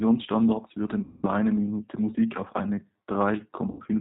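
Throughout, the speech sounds slightly rough and synthetic, with nothing above 4 kHz. This is the G.729 codec, which rebuilds each 10 ms frame from a vocal tract filter, a pitch predictor and a handful of pulses. The degree of damage fits an 8 kbit/s rate.

From 1.03 to 1.27 s, and again from 3.71 to 3.81 s, the speech smears into a buzzy tone or a coloured noise that fades. This is VoIP packet loss concealed by the speech codec. About 200 ms and then 80 ms of audio went missing, and the decoder filled each gap by extending its last pitch and filter at steadily falling gain.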